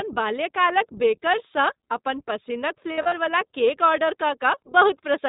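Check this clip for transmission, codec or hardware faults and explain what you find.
There are two problems: the whole speech clip has gone through a narrowband codec, and a short stretch has dropouts.

The iLBC codec runs throughout. It cuts everything above 4 kHz and codes each 20 ms frame on its own, and the voice comes out slightly rough and synthetic.

There are lost iLBC frames from 2.92 to 3.14 s, about 140 ms missing over 200 ms, with runs up to around 70 ms. The decoder repeats the last pitch cycle with noise, so you hear a brief buzzy held vowel before it recovers.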